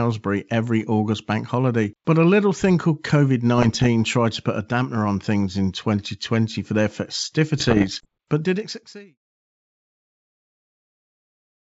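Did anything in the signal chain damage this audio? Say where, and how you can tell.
Yes, bit errors on an ADPCM link, in transmission on what sounds like a G.722 connection: rough, popping bursts with brief level jumps at 3.58–3.87 s, just before "tried to put a", and at 7.58–8.08 s. Each flipped bit throws off the decoder's step size and predictor, so the damage rings on rather than clicking once, fitting an error rate under one percent.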